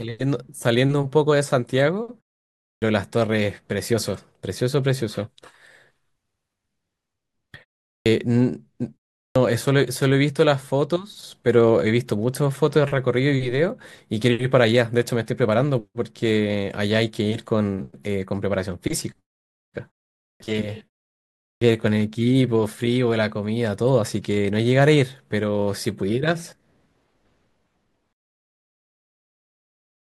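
Clipped starts after a pause occur at 2.71, 7.93, 9.24, 20.29 and 21.49 s. After silences of 0.34 to 0.68 s, the output device has dropped into an idle state and needs time to wake, so each time roughly 110 to 130 ms of the next speech is swallowed and it begins abruptly, missing its first sounds.

Truncation distortion on a fade runs from 28.13 s to the end at about 30.1 s, across the fade-out that starts around 28 s. The fade stage keeps too few bits and adds no dither, and the coarse stepping points to roughly 7-bit resolution. As the level sinks, the waveform collapses into a few square steps, so the tail turns gritty.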